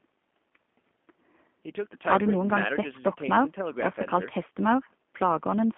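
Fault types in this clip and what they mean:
G.729 codec, throughout: the speech sounds narrowband, rough and faintly synthetic, which fits an 8 kbit/s codec that rebuilds each 10 ms frame from a vocal tract filter, a pitch predictor and a few pulses. Audible damage, and nothing beyond the 200 Hz to 3.4 kHz telephone band.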